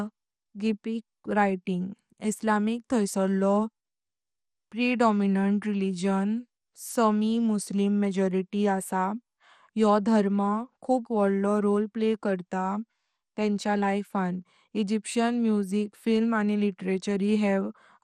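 Throughout the speech, the sound is dull, gurgling and grainy, and nothing is present above 14.3 kHz. The likely cause is MP2 compression at a low bitrate, consistent with 64 kbps. Starved of bits, upper sub-bands drop out and flicker, and the rest are quantised coarsely.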